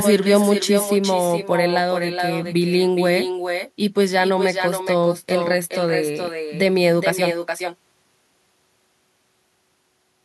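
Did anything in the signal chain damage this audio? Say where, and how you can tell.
Yes. Call processing: echo with no canceller, throughout. Every phrase returns about 400 ms later, only about 6 dB quieter and thinner. Far-end loudspeaker pickup isn't being removed.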